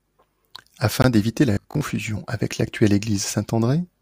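At 1.02 s the speech drops out completely for about 20 ms and resumes at 1.04 s. This is a Bluetooth stall: the audio halts abruptly rather than fading, and picks up again after the gap. The likely cause is radio interference delaying packets on the wireless link, so the headphones' small playback buffer emptied and output paused until retransmitted data arrived to refill it.

From 1.53 to 1.87 s the speech turns into a hard, metallic buzz that still loosely follows the syllables. This is robotic sound from repeated short buffers. The buzz sits at 50 Hz, which fits a 20 ms fragment being looped, and roughly half of that stretch is repeated material rather than new audio. The likely cause is fresh data arriving too slowly, so playback reused the last short buffer to fill the gaps.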